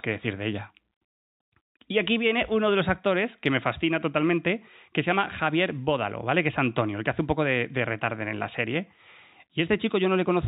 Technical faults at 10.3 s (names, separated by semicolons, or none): none